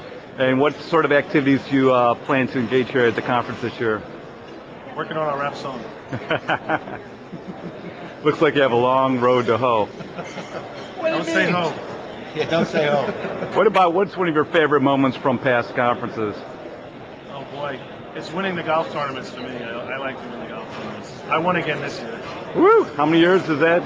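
Gain pumping runs throughout: the gain swings around 5 dB, likely from a fast limiter chasing excessive input gain.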